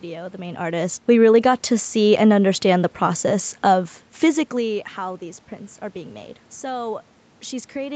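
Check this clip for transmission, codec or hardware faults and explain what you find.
No transmission, codec or hardware faults turn up: the speech has the normal band limit of a call path with nothing above 8 kHz, and the room noise in the background and the level changes around half a second and around 4 s come from the recording space and the talker shifting position, not from the system.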